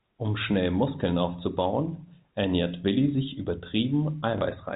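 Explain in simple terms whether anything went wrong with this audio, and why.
Something did go wrong, near the very end of the speech, from 4.38 to 4.41 s. This is packet loss with the last packet repeated. About 30 ms of sound never arrived, so the receiver filled the hole by replaying the chunk it had just played. That gives a small blip, rather than the clean silent gap of a plain dropout. The muffled telephone quality, with nothing above 4 kHz, is just the normal phone-line format.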